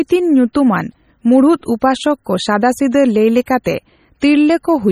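Throughout the speech there is a watery, swirling quality, with metallic chirping on s sounds and softened onsets. This is likely MP3 compression, and the damage is heavy, which fits a very low bitrate of around 32 kbps. With so few bits, weak frequency components are discarded and reappear from frame to frame, producing the warble, while the content above 20.8 kHz is cut away entirely.

At 0.53, 3.46, 3.64 and 4.20 s, a brief hiss runs ahead of a sharp attack, spreading 12 to 19 ms before it and leaving the onset blurred. This is pre-echo. The codec spreads its quantisation noise evenly across a whole transform block, so when a loud attack falls late in a block, noise scaled for that attack also fills the quiet moment just before it.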